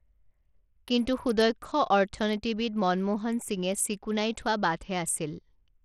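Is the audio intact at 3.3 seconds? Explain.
No, at 3.3 seconds the speech still has the Bluetooth SBC compression grit heard throughout: flickering, dulled treble and coarse noise, likely from a starved SBC link, consistent with about 80 kbps.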